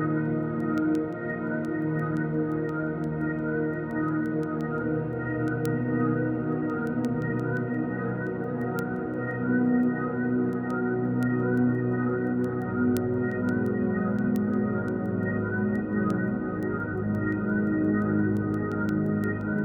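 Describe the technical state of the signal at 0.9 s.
At 0.9 s the signal carries word clock ticks, running from 0.26 s to 19.59 s: the receiver's clock drifts against the sender's by roughly 150 ppm, forcing what sounds like single-sample slips. The result is sharp, uneven ticks about five times per second.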